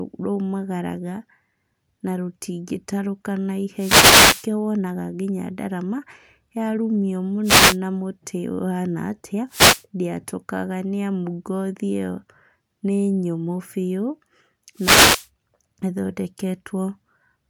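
Short swishes of static break through the speech four times: from 3.76 to 4.48 s, from 7.43 to 7.78 s, from 9.48 to 9.84 s, and from 14.75 to 15.28 s. These are wireless microphone noise hits. Each one is a moment where the analogue FM radio link fades as reflected signals cancel at the receiver. The receiver's own noise then briefly rises before the signal recovers.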